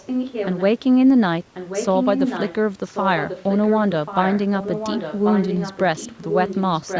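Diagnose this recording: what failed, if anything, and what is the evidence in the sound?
Echo leak in call processing. The speech returns 1.09 s late, about 5 dB below the speech (about 10 dB below at 2.88–6.62 s), at 0–0.63, 1.54–2.55, 2.88–6.62 and 6.79–6.99 s. Likely incomplete loudspeaker echo cancellation.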